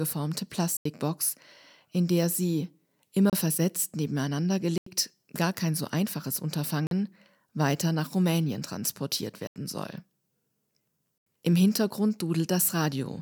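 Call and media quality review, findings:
Block of digital silence, six dropouts in speech. Hard cuts to silence. Four 85 ms holes at 0.77, 4.78, 9.47 and 11.18 s, which fits a missed 4096-sample buffer. Shorter 30 ms gap at 3.30 s, before "versetzt nebeneinander". 43 ms gap at 6.87 s, after "gar kein so einfaches". The output buffer is probably not being filled in time.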